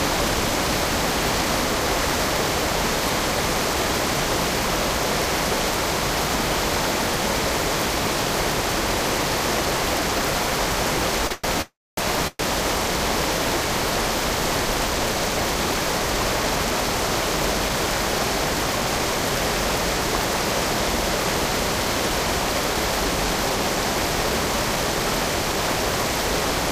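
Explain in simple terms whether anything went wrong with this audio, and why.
Around 11.27 s the sound briefly hangs, with one moment held about 30 ms too long and a faint buzz or dip. That is a short stall from a late packet. A piece of audio arrived late over the network, the receiver's waiting store of audio ran empty, and it stretched the last bit of sound until the piece turned up. Then it carried on from the same spot, so nothing is lost. The sound just pauses very slightly.

Right after, the sound freezes three times. From 11.32 to 11.46 s the last moment is drawn out as a fading buzz or hiss for about 111 ms. From 11.62 to 11.99 s it buzzes or hisses and then goes quiet for roughly a quarter of a second. From 12.27 to 12.41 s it stops for about 120 ms with only a tiny silence. These are call audio freezes, likely caused by audio held up on its way. Each time the sound resumes where it left off, adding a gap rather than skipping anything.

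Later the sound runs slightly fast, about 3% fast, from 14.62 to 16.00 s, from 16.43 to 17.87 s, and from 22.00 s to the end. Pitch stays the same. This is jitter buffer speed-up. After the earlier delays the receiver was holding more audio than it needed, so it trimmed tiny slivers over and over to catch up. It removed roughly 40 ms, 50 ms and 150 ms in those three stretches.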